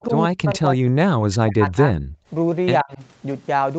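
From 0.08 to 1.95 s the speech sinks and breaks up for about a second and a half in total, dropping by roughly 40 dB at its deepest. This is likely speech suppressed in double talk: the echo canceller could not separate the talker from the loudspeaker echo and ducked the talker too. The waveform shows the envelope collapsing in ragged chunks, and the spectrogram shows energy vanishing in patches.

At 2.23 to 2.27 s the background is gated by the echo canceller. For about 40 ms the room sound drops by about 20 dB, then returns. This appears as a brief notch in the noise floor.

From 2.83 to 3.01 s the speech again dips, by roughly 25 dB, likely from speech suppressed in double talk. It shows as a short hollow in the envelope.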